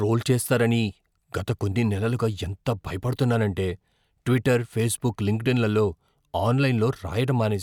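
No technical faults are audible.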